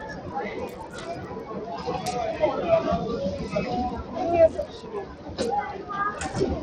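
A noise suppressor built for speech stays active across the whole recording of everyday sounds. It treats steady tones, ambience and decaying tails as noise and pulls them down, while sharper onsets mostly pass. The gain it applies rises and falls by roughly 10 dB, so the sound pumps and thins out, with sustained parts sinking and then recovering as the suppressor changes its mind about what counts as noise.

Also present throughout is damage that points to Bluetooth SBC compression as the likely cause. The codec splits the signal into a few wide bands and shares too few bits among them, which fits a rate near 80 kbps. The weaker upper bands get starved, so the treble flickers and drops away, and the remaining bands are coarsely quantised. The result is a plainly audible gritty, aliased noise riding on top of the sound.

From 0.69 to 1.0 s, the sound is cut by the noise suppressor. For about a third of a second it mistakes this part for noise and turns it down harder than its surroundings, by about 6 dB at the deepest point. 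The steadier or fading content sags audibly instead of holding its level.

The same sound cut by the noise suppressor returns from 4.66 to 5.36 s and lasts about 0.7 s. Here the drop reaches about 7 dB, so the sustained and decaying parts dip further and their tails end early, while any abrupt attacks within the stretch still come through.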